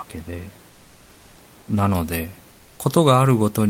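From 2.53 to 2.77 s, about 240 ms, the room noise sitting about 32 dB under the speech gives way to comfort noise in place of the background. The real texture drops out and a flat, featureless hiss takes over, about 2 dB quieter, before the actual background comes back. That's likely Opus discontinuous transmission: the sender stopped sending during the pause and the receiver filled it with synthetic noise shaped only roughly like the room.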